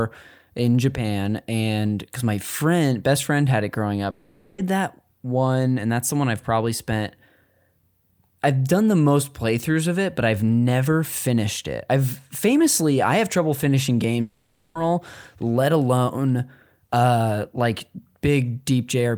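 A long network dropout likely occurs at 4.10 to 4.59 s, after "friend had it growing" and before "that one and that's", and again at 14.21 to 14.76 s, after "I have trouble finishing". Both times the speech stops for about half a second, and the receiver fills the gap by stretching the last sound into a fading buzz. The speech then resumes without the lost portion.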